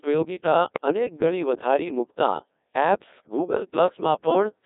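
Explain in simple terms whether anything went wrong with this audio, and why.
The speech passed through a Codec 2 vocoder, which rebuilds the voice from pitch and tone settings, leaving it robotic, buzzy and narrow. Bit errors on digital voice radio scramble those settings at 0.52 to 0.86 s and 3.88 to 4.01 s, causing sudden warbles and pitch jumps.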